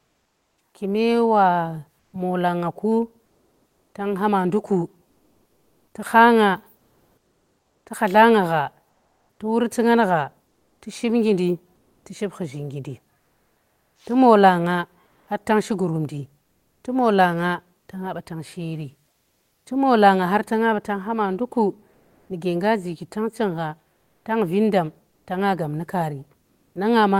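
Comfort noise in place of the background fills the pauses at 0.00–0.57 s, 1.99–19.65 s, 21.93–22.29 s and 23.93–26.75 s. It is steady, featureless hiss, about 4 dB quieter at first and about 4 dB louder at 21.93 s, likely from Opus discontinuous transmission. Spectrograms show smooth, textureless bands; waveforms show flat noise floors.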